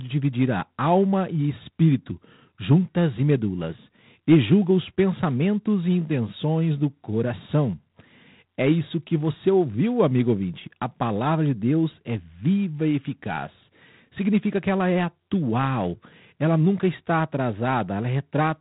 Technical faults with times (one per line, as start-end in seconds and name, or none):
0.00-18.61 G.726 ADPCM